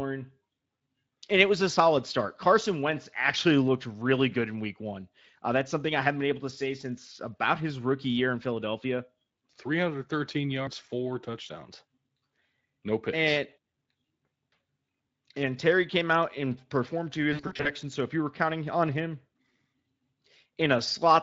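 From 17.33 to 17.71 s, just after "out and performed to", VoIP packet loss concealed by the speech codec stretches the speech into a buzzy tone or a coloured noise that fades. About 200 ms went missing in bursts up to 60 ms, which fits roughly ten 20 ms frames. The decoder extrapolates through the gaps, and the lightly coded Speex audio stays weak briefly afterwards.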